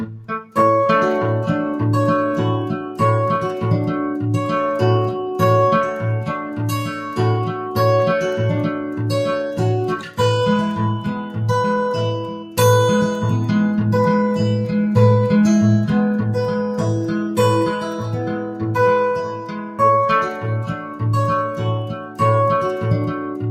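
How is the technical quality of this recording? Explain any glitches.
The recording is compromised by a noise suppressor meant for speech, which keeps pulling parts of these non-speech sounds down.

Throughout the clip, noise suppressor applied to music or sounds: level swings up and down by around 10 dB, so the audio pumps and thins. Sharp onsets pass, but anything steady or decaying gets treated as background noise and pushed down. Held sounds and ambient tails seem to sink, giving an uneven, fluttering texture instead of a natural envelope.

Sound cut by the noise suppressor happens at 0.05–0.56 s (about 9 dB), 6.37–7.77 s (about 6 dB), 8.71–10.19 s (about 8 dB), 11.22–12.58 s (about 9 dB), 17.2–22.2 s (about 9 dB, the longest, with roughly two seconds of it affected), and 23.14–23.43 s (about 5 dB). In each, the suppressor misclassifies sustained or fading material as noise, so those stretches drop in level or their decays are cut short.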